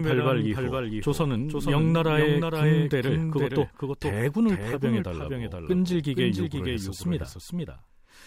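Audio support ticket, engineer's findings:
Doubled audio track throughout. Full-band speech copy trailing about half a second behind, a few dB quieter, no decay or room colour. Spectrogram: every syllable pattern repeated, shifted right. Likely cause: second capture via slower path, mixed back in.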